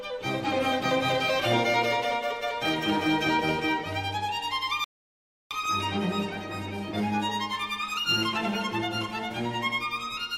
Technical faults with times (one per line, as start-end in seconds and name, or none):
4.84-5.51 rebuffering stall